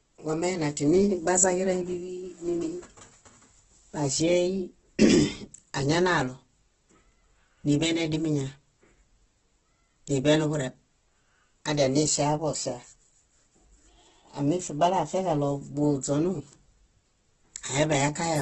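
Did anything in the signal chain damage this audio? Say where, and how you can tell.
Yes, at the codec stage, with the likely cause being Opus compression in its CELT music mode. Throughout the speech sounds heavily grainy and rough, with nothing above 11.7 kHz, which fits about 12 kbps. The bands are noise-filled rather than hollowed out, so there is less swirling than with MP3.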